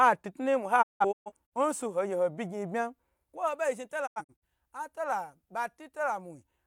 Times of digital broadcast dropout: 0.81-1.53, 4.05-4.44

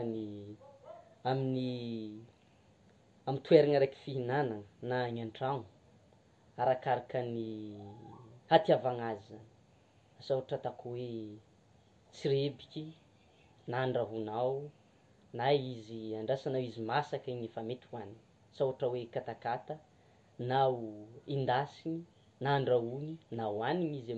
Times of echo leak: none

